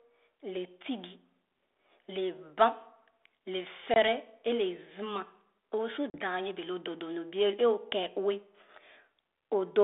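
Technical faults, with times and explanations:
3.94–3.97 s and 6.10–6.20 s, packet loss on an ADPCM call: about one packet (20 ms) and then two (40 ms) of the 32 kbit/s G.726 stream go missing and become silence. The decoder's predictor and step size fall out of step, so each hard-edged gap ends in brief distortion.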